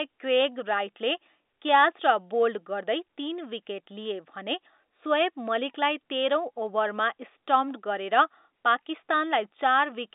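No technical faults occur anywhere in this telephone-band speech, so there is nothing to describe in time order.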